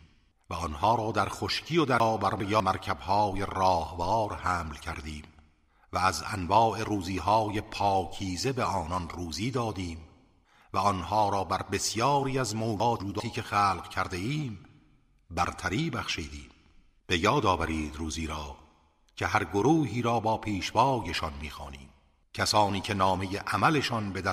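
Chunks out of order at 2.0 to 2.6 s and again at 12.8 to 13.2 s. In each span, a 200 ms block of audio was delivered late and plays after the blocks that should follow it: two blocks late in the first span, one in the second. No audio is lost, but the sequence is scrambled, so each moment sounds briefly jumbled, with three hard joins where the misplaced block is spliced in.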